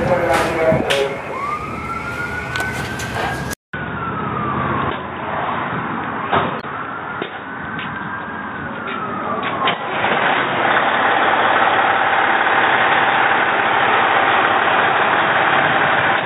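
At 3.53 s the sound drops out for about 200 ms. When it returns, nothing remains above 3.8 kHz, and that narrow band holds to the end. The loudness stays about the same. A new noise floor appears, well below the signal. The likely cause is the input switched to a poorer device, such as another microphone or a headset's call profile. That device passes a narrower band and brings its own tone and background noise.

From 6.60 to 6.64 s there is a brief disturbance. This is damaged data in a compressed stream. Part of the encoded stream was corrupted, so the decoder could not read those frames properly. It lost its place and had to find the next valid frame header before decoding could continue. For those few tens of milliseconds the result is a short glitch in the audio, not clean sound.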